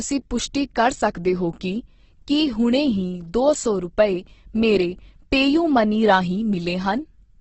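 From start to finish, the speech sounds rough and grainy. Nothing is heard above about 8.2 kHz. This is likely Opus compression in its music mode, at a rate near 12 kbps. Short of bits, the encoder fills bands with folded or noise-like content.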